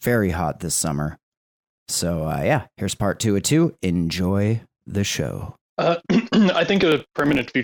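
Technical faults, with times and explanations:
6.76 to 7.53 s, processor overload crackle: gritty tearing rides on the speech as dozens of very short buffers, under a millisecond each, miss their deadlines and are skipped, leaving hard-edged gaps. Unlike clipping, it ignores loudness and stops once the load eases.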